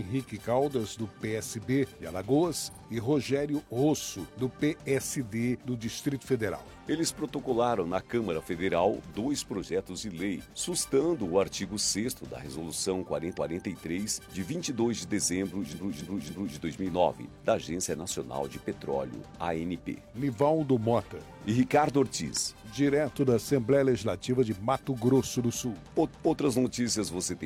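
Repeated frames at 2.70, 13.33, 15.70 and 26.06 s: the decoder replays a chunk, a 46 ms stutter played twice more, then 279 ms loops, the 15.70 s one looping three extra times.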